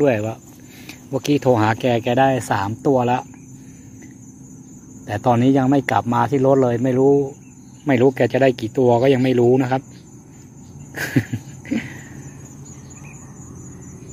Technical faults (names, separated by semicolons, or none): none